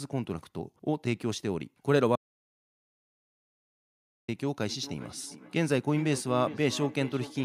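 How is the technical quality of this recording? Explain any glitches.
The recording has two clear faults, a full cutout and then a repeating echo.

From 2.16 to 4.28 s there is an audio dropout to silence: about 2.13 s of dead, roomless quiet, likely from a lost input while silence kept being written.

From 4.68 s to the end, feedback echo between two devices makes the speech return roughly every 0.4 s, peaking about 14 dB below the voice, as one device replays another's microphone feed.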